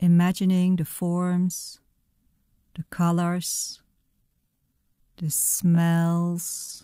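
A speech clip in which software likely stretched the final stretch of audio to fill a longer slot, holding pitch by repeating short pieces. From 3.84 s to the end, just after "the colors", this time-stretched section runs at about 0.63 times normal pace, dragging while the pitch stays unchanged.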